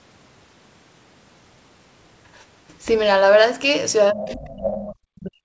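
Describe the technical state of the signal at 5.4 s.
At 5.4 s the speech is pulled down deeply, by roughly 40 dB, from 4.12 s to the end. This is likely speech suppressed in double talk: the echo canceller mistook the talker for echo.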